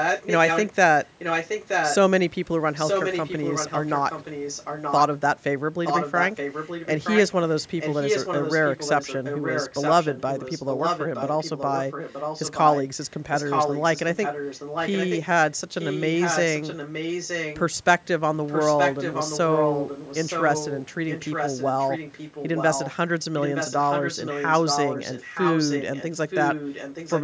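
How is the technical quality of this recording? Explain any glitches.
The recording has a persistent echo leak: a delayed second copy of the speech runs under the main talker for almost the whole clip.

It appears at 0.0–0.69 s, 1.05–1.96 s, 2.74–5.03 s, 5.84–15.21 s, 15.79–17.61 s, 18.47–22.96 s and 23.39–27.22 s. Each phrase returns about 0.92 s later. In the first two stretches the copy is roughly as loud as the original, and after that it sits a few dB lower. The likely cause is a far-end loudspeaker whose echo canceller failed to remove what its microphone picked up, so the call audio was sent back. The speech also shows the call microphone's normal high-pass filtering.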